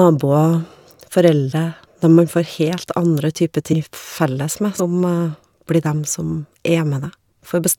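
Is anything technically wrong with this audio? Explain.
Yes. The speech has compressed frames skipped at 1.51 s, 3.72 s and 4.79 s. Whole coded frames never reach the output, so the audio jumps ahead by roughly 70 ms, 200 ms and 100 ms, multiples of a frame length near 23 ms. Because adjacent frames overlap, each join sounds like a short smeared blip, not a sharp click. Unlike a dropout, no silence is inserted; the sound simply lurches forward, with material missing.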